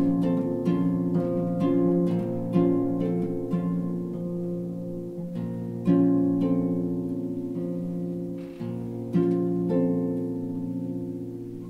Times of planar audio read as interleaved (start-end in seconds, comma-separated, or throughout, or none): none